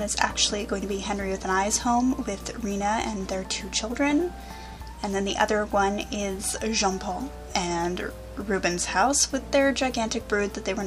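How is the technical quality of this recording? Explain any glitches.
The recording has one fault, mains hum, running for the full length of the clip.

A ground loop or a nearby transformer is leaking the power line into the signal, leaving a steady low tone at 60 Hz with a few low harmonics. It sits fairly high, roughly 15 dB below the sound itself. Unlike low-frequency rumble, which wanders and is broadband, this hum holds one fixed pitch and never changes level.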